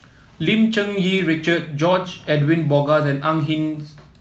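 No technical faults occur at any point in this speech, so there are none to describe in time order.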